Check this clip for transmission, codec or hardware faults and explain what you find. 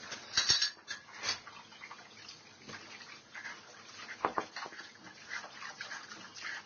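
One codec fault runs through the whole clip. Throughout, transcoding between lossy codecs is likely: nothing exists above 6.8 kHz, and two different sets of artefacts, consistent with low-rate Vorbis then Opus, are heard together.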